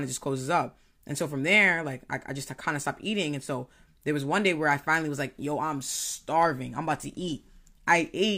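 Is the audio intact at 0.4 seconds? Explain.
Yes, the audio is intact at 0.4 seconds, with no dropout, glitch or distortion heard at that point.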